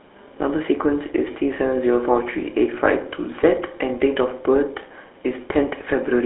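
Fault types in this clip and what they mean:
GSM full-rate codec: The speech has been through the old GSM phone codec, which models the vocal tract and drives it with a sparse pulse train, so the voice comes out plainly buzzy and gravelly, squeezed into roughly 300 Hz to 3.5 kHz, consistent with a 13 kbps link.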